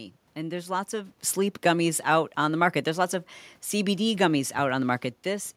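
Nothing stood out on listening; the room noise and the level changes as the talker shifts position around the start and near the end are part of the recording itself.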